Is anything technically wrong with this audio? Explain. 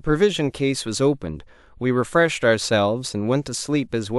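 No, no technical faults heard.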